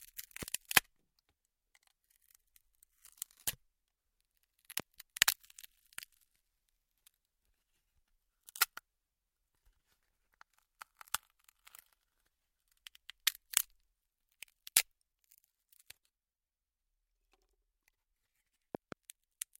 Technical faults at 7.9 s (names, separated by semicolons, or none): none